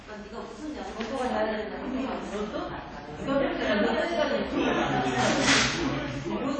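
Throughout the clip, the everyday sounds carry a ringing, washy smear and a hiss that swells and fades with the signal, with nothing above 9.8 kHz. This is likely WMA compression, its long transform blocks spreading quantisation noise, at a starved bitrate around 32 kbps.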